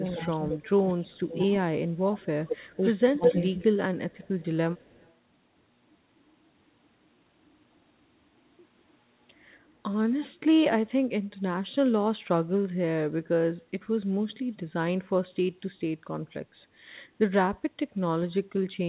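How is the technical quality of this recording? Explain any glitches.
The first five seconds have two problems: the speech dips and cuts out, and a delayed second copy of it trails behind. The whole recording is band-limited, with nothing above 4 kHz, as expected from a narrowband telephone-style call codec.

From 0.0 to 4.35 s, the speech repeatedly sinks, sometimes by about 25 dB, for roughly three seconds in total. This is likely speech suppressed in double talk: with both sides talking, the echo canceller mistook this talker for loudspeaker echo and turned it down.

From 0.07 to 1.07 s, a repeat follows the speech about 205 ms behind, around 10 dB quieter. It returns from 2.21 to 5.14 s at about 210 ms delay and only about 5 dB below the speech. This is likely echo leak: a loudspeaker's sound reached the far microphone, and its canceller failed to remove it.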